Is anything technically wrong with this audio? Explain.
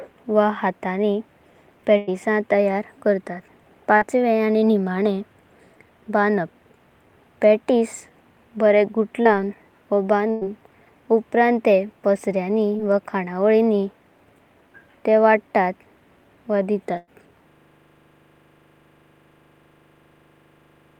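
Yes, the speech has dropouts of two kinds.

A burst of packet loss occurs at 1.97–2.09 s, 10.31–10.43 s and 16.97–17.09 s. Each time about 100 ms of consecutive audio failed to arrive in time for playback. The receiver bridged each hole by prolonging the last sound it had and fading it out over roughly a tenth of a second, so a voiced sound turns into a held buzz and an unvoiced one into a dwindling hiss. The speech then picks up later, with that stretch gone.

Short concealed packet loss occurs at 3.97–4.03 s, 9.23–9.27 s and 12.77–12.81 s. At the first, about 40 ms went missing, and at the other two about 20 ms each. The decoder patched each gap by extending the preceding sound, following its pitch if voiced or as shaped noise if not, before blending back into the real signal. These are heard as a brief smear or wobble, and a quick consonant can disappear.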